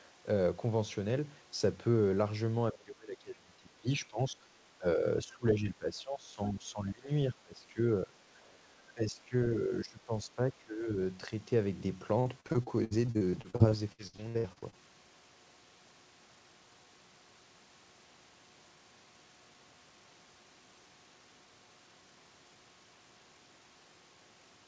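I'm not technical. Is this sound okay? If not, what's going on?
No. There are two separate problems.

First, the voice keeps dipping in loudness or partly vanishing at 2.72 to 4.38 s, 4.78 to 5.06 s, 5.23 to 7.1 s, 7.32 to 7.82 s, 8.02 to 8.2 s, 8.94 to 9.35 s, 9.54 to 10.97 s, and briefly at 11.3 s. This is speech suppressed in double talk, likely caused by both people talking at once. The call's echo remover couldn't tell this voice apart from the echo of the other person, so it turned the voice down. The sound gets quieter or drops in pieces.

Second, from 12.2 to 14.78 s the voice turns choppy and robotic. This is repeated packet loss (robotic sound). Small chunks of audio kept going missing, each gap no longer than about a sixteenth of a second. Each gap was patched by stretching the sound just before it, and about a third of this stretch is patched sound. The sound itself breaks up.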